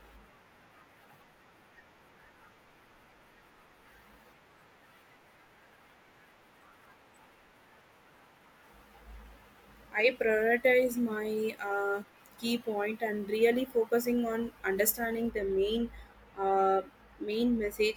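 De-emphasis applied wrongly affects the speech from 15.29 s to the end of the clip at 17.97 s. A treble-cut filter designed to reverse pre-emphasis has acted on audio that had no pre-emphasis, or has been applied twice, so the high end rolls off in a smooth, gradual slope, reaching about 8 dB down at 10 kHz relative to 1 kHz. Consonant detail and air fade, leaving these final seconds dull and muffled.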